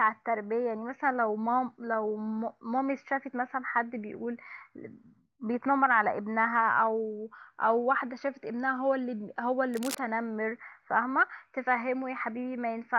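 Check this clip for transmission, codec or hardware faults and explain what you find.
One hardware fault is audible, cable scratch noise, from 9.74 to 9.99 s. A worn cable, connector or control was likely moved, so its contact resistance fluctuated rapidly, injecting dense, irregular noise bursts roughly 10 dB below the speech, heard as a quarter-second scratchy rustle over it.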